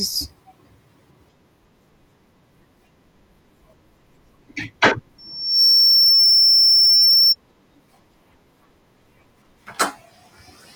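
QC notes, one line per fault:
5.18–7.36 s, loudspeaker feedback squeal: the microphone is picking up its own loudspeaker, and the loop gain passes unity near 5.4 kHz, so that frequency reinforces itself, swelling within about half a second into a piercing tone roughly 15 dB above the speech.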